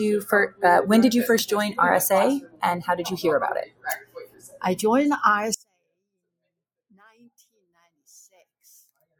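Throughout, the sound pumps and thins, swinging by around 10 dB. A noise suppressor built for speech was applied to music or sounds, treating sustained material as noise. From 2.41 to 2.62 s, a sound sinks by up to about 15 dB for roughly a fifth of a second. From 3.65 to 4.63 s, another sound sinks by up to about 18 dB for around a second. In both cases the noise suppressor cut the sound, mistaking it for noise and pulling it down more than its surroundings. From 5.54 s to the end, the level collapses by about 34 dB, leaving a faint residue. The likely cause is one channel inverted, so the shared content cancels when the channels are summed.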